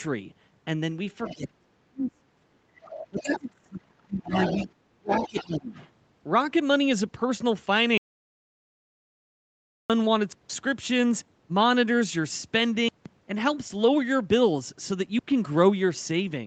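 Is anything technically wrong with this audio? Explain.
Yes, a few things. Around 1.24 to 1.36 s, 2.03 to 2.11 s, 2.83 to 3.4 s, 4.35 to 4.66 s and 5.09 to 5.88 s you can hear the other side's voice leaking through. It's faint at first and fairly close to the talker by the end, likely because the echo canceller left loudspeaker sound in the mic.

Overlapping that, from 1.35 to 4.34 s and 4.65 to 5.76 s, the talker's speech is suppressed in double talk. Their voice dips by up to about 35 to 40 dB, likely as the canceller turns everything down while both sides talk.

From 7.98 to 9.90 s there's an audio dropout to silence. Nearly two seconds go dead, with no room tone, likely because the input was lost while recording carried on.

At 10.33 to 10.50 s and 12.89 to 13.06 s, blocks of digital silence cut in abruptly. Each is a 0.17 s short hole, which fits an 8192-sample buffer that wasn't filled in time.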